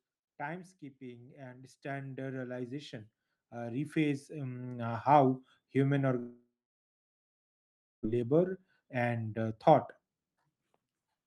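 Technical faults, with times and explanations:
0.98–5.13 s, automatic gain rising: the level climbs steadily by about 18 dB over roughly four seconds, with voice and background noise swelling together, as the gain control judged the input too quiet and kept raising its gain.
6.19–8.07 s, long network dropout (likely cause): the last sound is stretched into a fading buzz, followed by about 1.5 s of silence. When the audio resumes, about a second of it is gone and never played, because no packets arrived during that stretch.
8.14–11.23 s, jitter buffer speed-up: the speech runs at about 123% of normal speed with the pitch unchanged, so it sounds hurried. The receiver trimmed many short pitch-period pieces, around 0.7 s in all, to work off the extra delay left after the gap.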